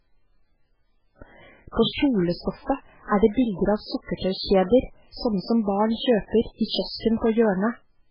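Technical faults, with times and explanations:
Throughout, MP3 compression: the speech sounds heavily watery and swirly, with nothing above 5.3 kHz. This fits a very low bitrate near 8 kbps, likely from a starved encoder cutting treble and zeroing weak lines. A spectrogram shows a hard ceiling and flickering gaps.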